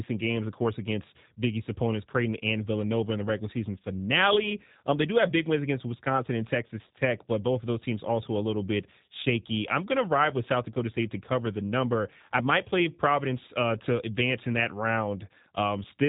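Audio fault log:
Throughout: G.729 codec. The speech sounds rough and faintly synthetic, thin and boxed-in, with nothing above about 3.8 kHz, so sibilants lose their hiss and consonants blur at the edges. The damage is plainly audible. The cause is heavy low-rate coding that fits G.729A at 8 kbit/s: each 10 ms frame is rebuilt from a vocal tract filter, a pitch predictor and a few pulses, not from the waveform itself, which leaves that buzzy, reconstructed texture.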